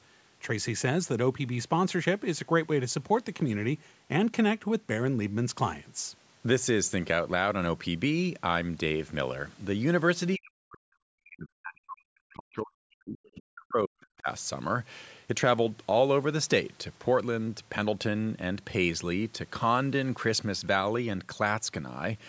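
From 10.36 to 13.19 s the speech sinks and breaks up, falling by as much as roughly 40 dB across about three seconds. This is speech suppressed in double talk, likely because the far side spoke at the same time and the echo canceller, unable to separate the talker from the loudspeaker echo, turned everything down. Unlike a network dropout, the level dips unevenly instead of cutting to silence with a hard edge.

At 13.25 to 13.3 s comes a brief scrap of the other side's voice leaking through, very faint, well over 30 dB below the speech. Because it is a separate voice, not a smeared tail of the talker's own sound, it reads as residual echo that the canceller missed, not as room reverberation.

From 13.35 to 14.28 s the same double-talk suppression returns for about a second, with similarly deep, uneven dips. The call's microphone processing leaves nothing above 8 kHz throughout.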